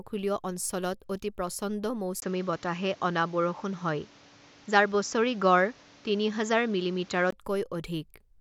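Input switched to a poorer device, from 2.20 s to 7.33 s: after a brief gap of about 20 ms, the speech loses everything above 7.5 kHz, turning duller and boxier, while its level shifts by a few decibels and a new background noise appears, sitting roughly 30 dB beneath the speech. The likely cause is the recording input jumping to a narrower-band microphone or headset profile, with full clarity returning at 7.33 s.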